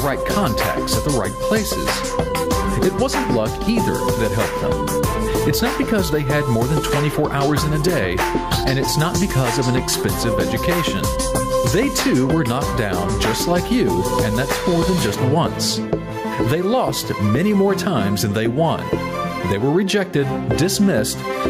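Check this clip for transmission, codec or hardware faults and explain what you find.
There is one fault, gain pumping, and it runs through the whole clip. The gain keeps pumping, with the level swinging by something like 10 dB. Loud and quiet passages sit unnaturally close together, so everything sounds squashed. The likely cause is input gain set far too high for the microphone, with a fast limiter or compressor clamping down on each peak and releasing in the pauses.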